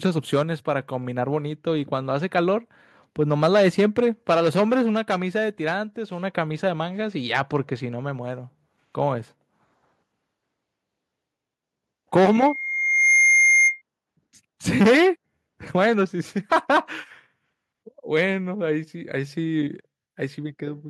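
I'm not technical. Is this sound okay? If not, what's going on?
No. From 12.25 to 13.82 s there is loudspeaker feedback squeal. A microphone picks up its own loudspeaker. One pitch, near 2.1 kHz, feeds on itself. It swells over about a second into a piercing whistle, louder than the speech.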